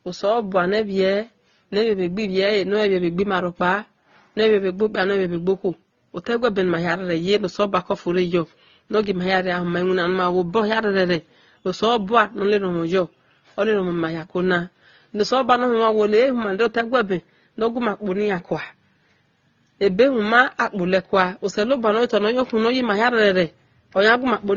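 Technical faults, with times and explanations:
Throughout, transcoding between lossy codecs: the speech has nothing above 7 kHz, and two kinds of coding artefact are heard together. The sound points to a low-rate AAC encode, likely re-encoded to Opus. The second codec spent bits on the first one's damage and added its own.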